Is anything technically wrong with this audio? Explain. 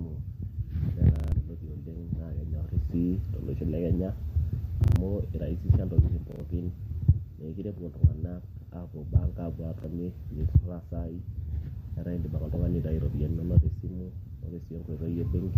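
Yes. Around 1.16 to 1.32 s, 4.84 to 4.96 s, 6.32 to 6.40 s and 9.80 to 9.84 s the speech stutters, the same short fragment sounding again with a hard join each time. These are repeated buffers: fresh audio arrived late, so the last 40 ms piece replayed up to four extra times, losing roughly a tenth of a second or more of speech at the first two.

At 12.55 s there is a brief noisy smear where the sound should continue cleanly. This is lost LE Audio frames. The gap fits a single missing 10 ms frame, which the decoder covered by reusing the previous spectrum with scrambled phase. The light grainy edge throughout is likely from the Bluetooth LC3 link.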